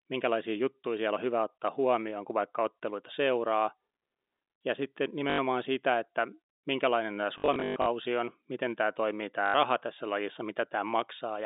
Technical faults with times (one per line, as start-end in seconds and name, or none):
5.30-5.38 packet loss with last packet repeated
7.38-7.86 packet loss with last packet repeated
9.46-9.54 packet loss with last packet repeated